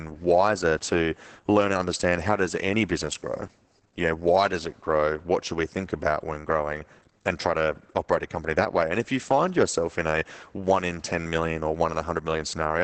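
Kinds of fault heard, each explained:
Opus voice compression: speech is muffled, hoarse and slightly robotic throughout, with nothing above 8 kHz, which fits SILK linear-prediction coding at roughly 10 kbps.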